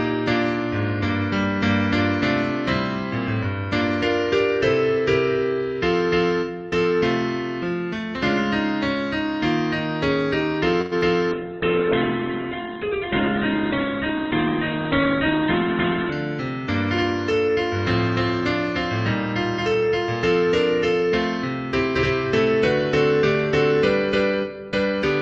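At 10.81 s a call audio freeze begins and lasts until 10.93 s. The sound stretches into a fading buzz or hiss for about 100 ms, likely because delayed packets emptied the jitter buffer. It then resumes where it stopped, so a gap is inserted and nothing is lost.

From 10.99 to 11.03 s comes a short concealed packet loss. About 20 ms of audio never arrived, and the decoder covered the hole by extending the preceding sound before blending back in. The result is a brief smear or wobble.

From 11.33 to 16.20 s there is a call bitrate drop. The Opus stream falls from 48 to 8 kbps, and the audio bandwidth narrows from 12 kHz to 4 kHz. For nearly five seconds the sound turns muffled and rough, with a watery coding texture, before full quality returns.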